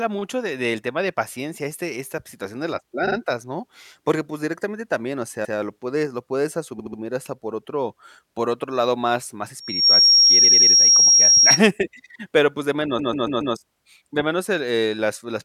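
Speech with two kinds of fault. Repeated frames cause stutters at 3.07, 5.44, 6.78, 10.43 and 12.98 s, each where a short block of compressed audio plays again. The 46 ms block repeats twice, the 116 ms block once, the 70 ms block three times, the 93 ms block three times, and the 139 ms block four times, which adds over half a second. On a waveform or spectrogram the same short pattern tiles side by side. A loudspeaker feedback squeal runs from 9.60 to 11.60 s. The microphone-to-speaker loop gains more than unity at 5.6 kHz, so a single tone there swells within about a third of a second to roughly 10 dB above the speech. It shows as a bright horizontal line across the spectrogram.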